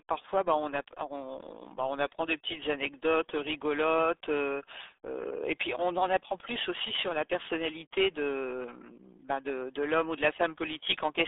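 From start to finish the speech carries RealAudio 14.4 codec damage. Nothing passes above 3.8 kHz, and the band sits near 250 Hz to 3.6 kHz. Unlike a clean telephone band-limit, heavy gargling smear reveals a starved low-bitrate coder, consistent with roughly 8 kbit/s.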